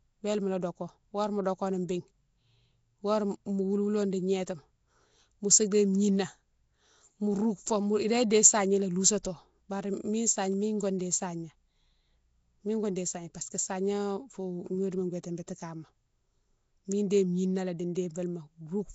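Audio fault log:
Throughout: Nellymoser compression. The speech has a rough, hissy fringe clinging to it and a smeared, underwater feel, and the damage is plain to hear. There's nothing above about 7.7 kHz, so the top end is simply gone. That's most likely Nellymoser Asao, Flash's old microphone codec. At 32 kbps it has too few bits to go round, so the weaker bands get filled with noise rather than coded properly.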